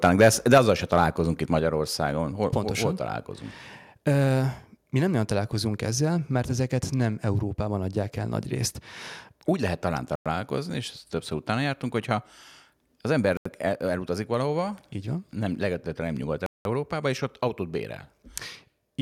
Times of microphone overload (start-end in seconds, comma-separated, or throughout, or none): 0.04-0.58